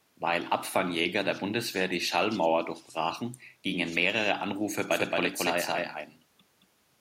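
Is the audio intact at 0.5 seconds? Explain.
Yes, the speech at 0.5 seconds is intact, with no fault at that moment.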